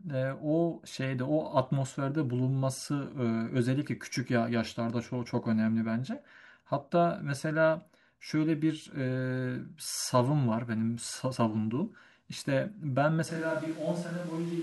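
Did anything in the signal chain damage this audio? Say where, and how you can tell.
Yes. A switch to a distant microphone occurs at 13.3 s and lasts to the end: the speech turns suddenly roomy and hollow, thinner in the bass, about 5 dB quieter, with background noise rising. This is likely a failed close-microphone feed at capture, leaving only a farther pickup.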